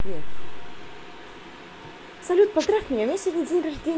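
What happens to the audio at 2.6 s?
The radio link of an analogue FM wireless microphone faded at that point, most likely because reflected copies of the signal arrived out of phase and cancelled at the receiver. From 2.59 to 2.67 s, about 80 ms, the receiver's own noise rose above the weakened carrier, producing a wireless microphone noise hit: a brief swish of static before the signal recovers.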